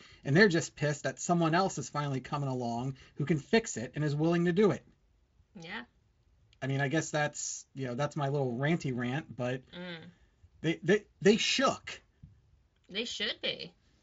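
At 3.03 to 3.06 s, between "is finally coming along" and "who can fix it", the sound smears into a brief buzzy tone or coloured noise that fades. This is VoIP packet loss concealed by the speech codec: the decoder extrapolated across a gap that fits one lost 20 ms frame.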